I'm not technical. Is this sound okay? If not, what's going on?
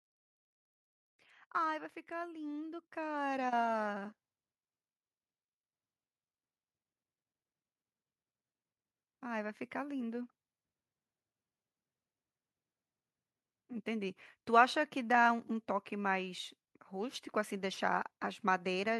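No. From about 2.08 to 4.22 seconds there is automatic gain rising. The recorder decided the input was too quiet and slowly turned itself up. So the voice and the background noise grow louder together over those two seconds.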